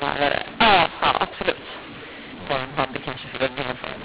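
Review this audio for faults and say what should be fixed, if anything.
Throughout the speech, a mu-law and A-law mix-up makes the sound harsh and distorted. Samples coded as mu-law are decoded as A-law, which scrambles levels and lifts the quietest samples well above silence. On a waveform, the pauses fill with a thick band of noise instead of lying flat. A spectrogram shows broadband hash in the gaps, capped at 4 kHz by the telephone band.

To prevent this, set the decoder to the same G.711 law the encoder used, which here is mu-law.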